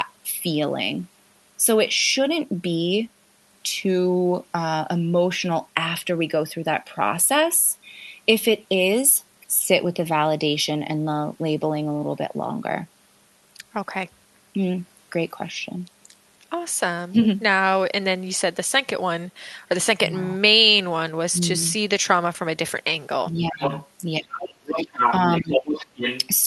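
Speech suppressed in double talk begins at 23.39 s. For about 0.2 s the talker's speech drops by roughly 20 dB. The likely cause is an echo canceller that, with both sides talking at once, could not tell the talker from the loudspeaker echo and turned everything down.

The other side's voice leaking through follows from 23.62 to 23.9 s. A second voice sits only about 5 dB under the talker, likely residual loudspeaker echo that the canceller failed to remove from the microphone.

The two faults then overlap. Suppression runs from 24.19 to 24.99 s, with dips as deep as about 25 dB over roughly 0.7 s. Leakage runs from 24.4 to 25.14 s, with the second voice about as loud as the talker.

Leakage returns from 25.37 to 26.28 s at about 5 dB below the speech. Inside it, a brief dip of about 15 dB lasts from 25.4 to 25.5 s.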